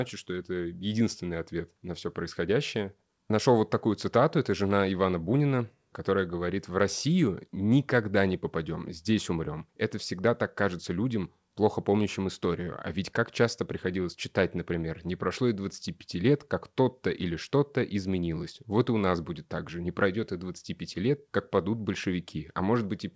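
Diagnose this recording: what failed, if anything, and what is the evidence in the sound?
Nothing has failed here: the speech came over a call link whose audio tops out at 8 kHz, which fits a wideband codec like G.722, and there's nothing in the sound that points to trouble at any stage.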